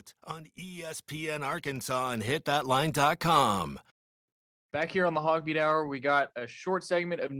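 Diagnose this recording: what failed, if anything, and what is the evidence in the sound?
Automatic gain rising from 0.26 s to 3.65 s, in the call-processing stage. The speech and the background noise swell together by about 14 dB over those three seconds, because the automatic gain control judged the input too quiet and steadily raised its gain.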